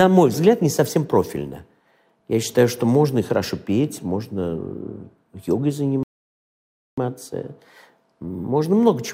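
At 6.03 s the sound cuts off abruptly and stays silent until 6.98 s, a gap of about 0.94 s, before playback picks up again. This is a playback stall: the player was likely starved of data or had its thread blocked, so it had nothing to send to the output. What separates it from an ordinary dropout is the length. A dropout lasts milliseconds, while this is a sustained silence of nearly a second in mid-flow.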